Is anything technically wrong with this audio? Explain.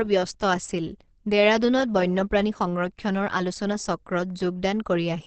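Yes. Opus compression throughout: the speech sounds muffled and hoarse, with nothing above 8.4 kHz. That narrow band and rough texture likely come from a low-rate encoder switching to its speech-oriented SILK mode, which fits roughly 16 kbps, trading brightness and clarity for bits.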